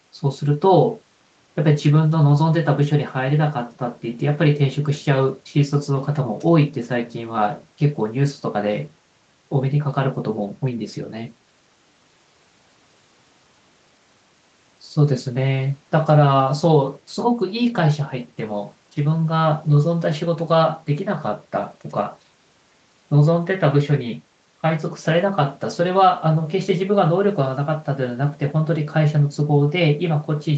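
No technical faults are audible.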